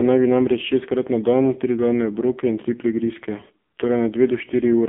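Speech that sounds buzzy, thin and synthetic throughout, squeezed into a telephone band from 200 Hz to 3.5 kHz with nothing above it. This is heavy AMR narrowband mobile codec damage, the coarse vocal-tract modelling pointing to a very low bitrate of about 5.9 kbps.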